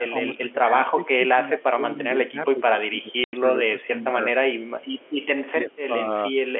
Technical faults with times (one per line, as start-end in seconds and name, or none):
0.00-4.18 speech suppressed in double talk
3.24-3.33 packet loss filled with silence
4.81-5.26 echo leak
5.51-6.36 speech suppressed in double talk
5.70-5.77 echo leak